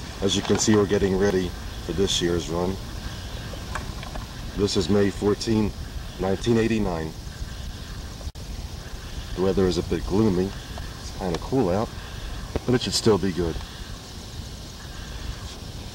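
A sudden voltage pulse, likely from a switch or static discharge, hit the chain at 12.56 to 12.58 s, giving one loud pop roughly 15 dB above the sound.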